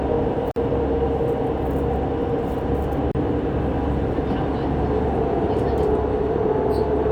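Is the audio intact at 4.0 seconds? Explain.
Yes, the audio is intact at 4.0 seconds, with no dropout, click or other fault at that moment.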